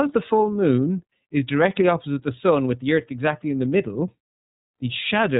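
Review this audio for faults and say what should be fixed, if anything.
The iLBC codec damage runs through the whole speech clip and is plainly audible. Each 30 ms block is coded independently at a rate that fits about 13.33 kbps, leaving speech rough and synthetic. A spectrogram shows a hard ceiling with nothing above 4 kHz. To prevent it, record and transmit through a wideband codec, or keep the uncompressed original.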